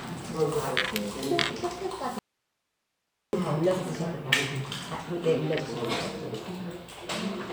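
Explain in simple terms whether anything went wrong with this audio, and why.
An audio dropout to a faint residue runs from 2.19 to 3.33 s. The sound cuts out abruptly for just over a second, leaving only faint hiss, then snaps back. The signal was likely lost while the recording path stayed live.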